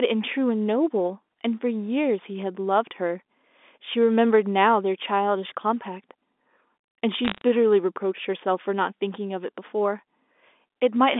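Telephone-band speech, G.711-coded, where bit errors on the digital phone line between 7.25 and 7.41 s flip a small fraction of bits, corrupting single samples into sharp ticks and brief crackle over the voice.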